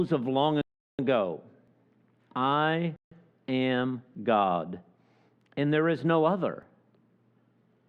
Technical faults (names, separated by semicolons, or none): rebuffering stall; audio missing between chunks